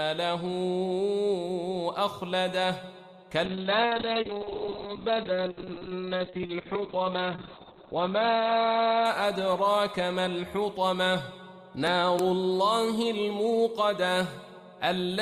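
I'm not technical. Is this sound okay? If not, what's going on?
No. From 3.47 to 10.37 s there is a call bitrate drop. The connection squeezed the sound into far less data, so it turns muffled and rough.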